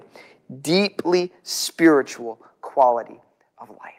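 Microphone overload shows up in this speech recording between 2.80 and 2.84 s, where a brief harsh, crackling edge lands on a loud peak. The likely cause is an input level set slightly too high, so the waveform tops ran about 1 dB past the converter's ceiling and were sliced flat. Only around 2 percent of the samples in that stretch are affected, which keeps the distortion short and sharp.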